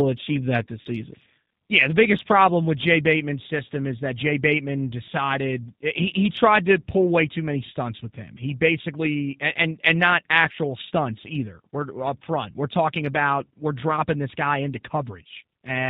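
From 0.81 to 0.87 s, about 40 ms of packets drop out and the speech codec's concealment fills the gap. It repeats the last pitch and vocal tract shape at falling gain, so the sound smears into a fading buzz or coloured noise, not a clean silence or click. The voice sounds weakened for a moment after it resumes, because each new frame builds on the guessed one.

Throughout the speech, the G.729 codec at 8 kbit/s cuts everything above 4 kHz. It rebuilds the voice from a few pulses per frame through a vocal tract model, which leaves it plainly rough and synthetic. That model-based roughness distinguishes it from the smeared, watery sound of a plain low-bitrate transform codec.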